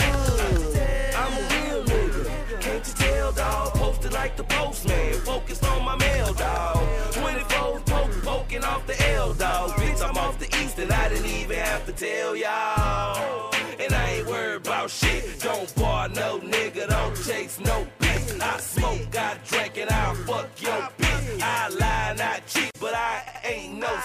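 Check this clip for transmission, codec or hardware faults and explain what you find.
There is one fault, repeated frames, heard twice. At 9.29 s a 26.1 ms block replays once. At 23.27 s a 78.4 ms block replays twice. The duplicated compressed frames make a stuttering repeat.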